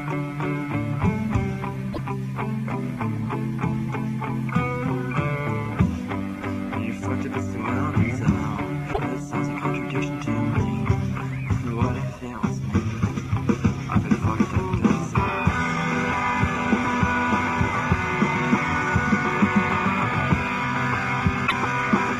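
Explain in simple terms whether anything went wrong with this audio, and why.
Three brief glitches occur at 1.92–1.99 s, 8.92–8.99 s and 21.46–21.52 s. These are likely a broken MP3 bit reservoir: after missing frames, the decoder reads stray borrowed bytes. That's why the sound skips ahead with a chirp, a burst of noise or a short gap.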